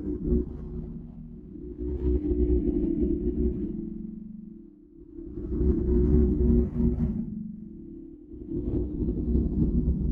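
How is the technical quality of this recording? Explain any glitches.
The technical quality is compromised throughout. A noise suppressor designed for speech was left running on this non-speech sound, and in three places it bites into the material itself.

Noise suppressor applied to music or sounds: For the whole clip the suppressor keeps deciding which parts are noise. It turns down steady, sustained content and lets sudden onsets pass, so its gain swings over a range of around 10 dB. The result is an unsteady, pumping level, with held sounds and decays thinning out while sharp attacks stay prominent.

Sound cut by the noise suppressor: From 0.82 to 1.61 s, 4.09 to 5.36 s and 7.6 to 8.5 s, the suppressor mistakes parts of the sound for background noise and attenuates them by up to about 5 dB more than their surroundings. Steady or fading portions audibly sink or have their tails clipped short, while abrupt transients come through largely intact. 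Each stretch sounds hollowed out or ducked, then recovers when the suppression lets go.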